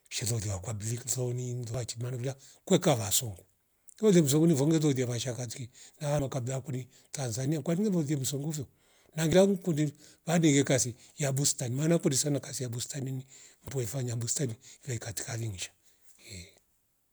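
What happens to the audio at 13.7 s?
At 13.68 s the speech has a very brief blip from damaged data in a compressed stream. Corrupted bytes made the decoder misread a frame and resynchronise. The result is a short glitch in the speech.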